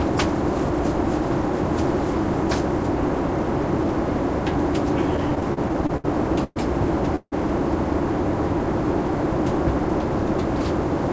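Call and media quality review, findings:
Repeated stalls (stutter), 5.17–6.07 s: eleven brief gaps (longest 69 ms) bridged by continued sound. Jitter buffer kept running dry on late packets. Rapid choppy dragging, nothing lost.

Call audio freeze, 6.44 s (119 ms) and 7.16 s (161 ms): one isolated fading hold each, the second ending in 50 ms silence. Likely delayed packets emptying the jitter buffer. Resumes intact.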